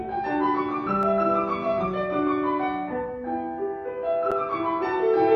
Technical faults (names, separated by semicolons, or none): block of digital silence